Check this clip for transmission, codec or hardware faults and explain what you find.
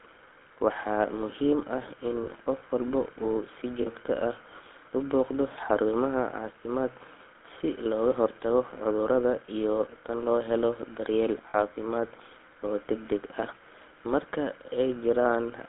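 Two faults are present: the speech has passed through the GSM full-rate codec for its whole length, and four brief dropouts show lost GSM frames.

GSM full-rate codec: Throughout, the speech was coded by a vocal-tract model excited by a sparse, evenly spaced pulse train, consistent with the 13 kbps full-rate coder. Only the band from about 250 Hz to 3.5 kHz survives, so the sound is thin and muffled. The coarse excitation adds a plainly audible buzzy, gravelly grain to the speech.

Lost GSM frames: At 2.24, 3.82, 11.5 and 13.28 s, the decoder was missing data and reused the last good frame's parameters. Each gap lasts about 0.02 to 0.05 s, which fits the loss of one or two 20 ms frames. In place of fresh speech you hear a short, rough metallic ring that sustains the preceding sound before normal decoding resumes.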